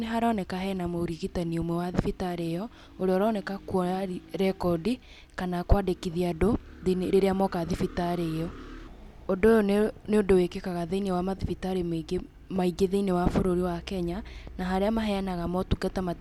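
Listening to the speech recording, nothing technical stood out.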